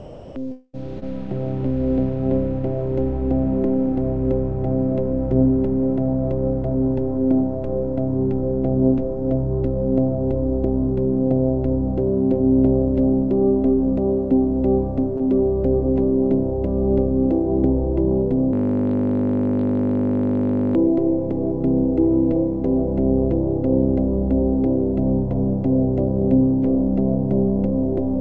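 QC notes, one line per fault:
0.00–0.36 s, comfort noise in place of the background: the opening background, sitting about 19 dB below the loud parts, gives way to a steady, featureless hiss about 2 dB quieter. This is likely discontinuous transmission with synthetic fill. Unlike a dropout, nothing fades or falls silent.
0.52–0.75 s, long network dropout: about 0.22 s of audio is missing, and the last sound is stretched into a fading buzz that ends in roughly 20 ms of silence. The cause is likely packets never arriving. Unlike short concealed loss, the hole is long enough to hear the fill decay before the sound resumes, and the missing part does not come back.
0.99 s and 15.18–15.21 s, short concealed packet loss: about 20 ms is lost each time, and the decoder patches it by extending the preceding sound before blending back. The result is a brief smear or wobble. Unlike the dropout, the fill is too short to fade or go silent.
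18.53–20.75 s, system hang loop: a single 20 ms slice repeats exactly about 111 times, producing a steady 50 Hz buzz for over two seconds while the sound hardware cycles one buffer during a freeze. Unlike dropout concealment, the repetition is exact and never decays.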